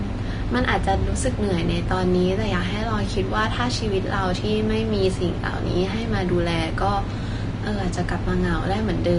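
From start to finish the speech carries what is likely Vorbis compression at a low setting. Nothing gets through above about 10.6 kHz, so the top end feels shut off, and the treble below that has been quantised coarsely enough that its fine detail turns into a grainy hiss of roughly the same energy. Consonant attacks smear and tonal parts sound roughened. The damage is plainly audible, which points to a bitrate somewhere around 33 kbps.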